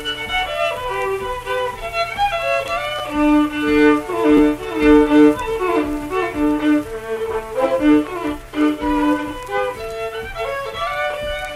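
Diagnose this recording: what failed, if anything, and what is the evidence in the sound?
The fault is in the driver or buffer stage: a repeated buffer, heard twice as a brief buzzy stutter, from 2.99 to 3.01 s and from 4.37 to 4.40 s. Each time, a piece about 10.7 ms long, which fits a 512-sample buffer, plays twice more with a hard join at each repeat. New audio did not reach the device in time, so it replayed its last buffer. Essentially no audio goes missing afterwards.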